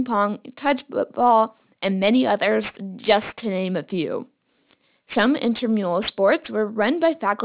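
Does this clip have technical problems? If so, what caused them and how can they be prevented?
Yes. Aliasing runs through the whole speech clip. The audio was downsampled without an anti-aliasing filter, so content above the new Nyquist frequency of 4 kHz folds back into the band at false pitches. The folding point fits a drop to an 8 kHz rate. Sibilants sound gritty and metallic, and the spectrum stays full right up to 4 kHz. The folded energy sits roughly 20 dB below the speech. To prevent it, low-pass filter below 4 kHz before reducing the sample rate.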